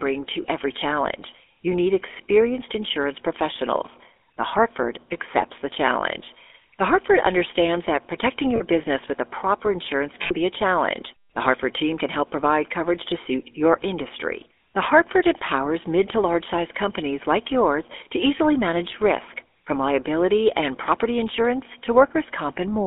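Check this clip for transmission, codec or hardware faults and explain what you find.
Two faults are audible. The whole recording has passed through the GSM full-rate codec, and three short bursts of lost GSM frames break into it.

GSM full-rate codec, throughout. The codec models the vocal tract and drives that model with a sparse train of regular pulses. Its roughness fits a 13 kbps stream. The damage is plainly audible as a buzzy, gravelly grain on the speech. The band is narrow, roughly 300 Hz to 3.5 kHz, so the sound is thin and boxy, with no air on top.

Lost GSM frames, at 0.42 to 0.45 s, 8.56 to 8.62 s, and 10.22 to 10.34 s. When a frame fails, the decoder reuses the last good frame's settings, with the level falling from the second lost frame on. Each gap sounds like a brief metallic ring. The first falls just before "every challenge" and fits one lost 20 ms frame. The second, about 40 ms, sits between "understands that protecting" and "business with a proper". 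The longest, about 80 ms, comes after "with a proper insurance" and rings before "be a challenge".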